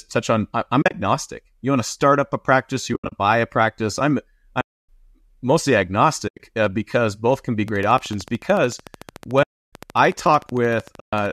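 AAC frame loss with muting opens short soft-edged holes at 0.82 to 0.94 s, 2.94 to 3.12 s (between "start up a practice" and "buy a practice I'm"), 4.61 to 4.88 s (right after "buy a practice I'm") and 6.28 to 6.39 s. Lost frames were decoded as silence, and the overlapping windows fade the speech out and back in rather than clicking. The two earlier gaps are broken into scattered dropouts, while the 4.61 s one is a single solid silence of about 280 ms.

A train of clicks starts at 7.68 s, just after "because both can be", and runs to 11.27 s. It is a regular ticking at about 13.4 per second, some fifty near-identical pops peaking about 5 dB above the speech and audible through pauses too. The likely source is electrical interference or a faulty connection injecting repeated pulses.

The frame-loss mutes return at 9.43 to 9.72 s, about 300 ms, and at 11.00 to 11.13 s, both heard against the continuing clicks. 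The gap lengths step in roughly 10 ms units, which fits the short frames of low-delay AAC, whose light graininess runs beneath the whole clip.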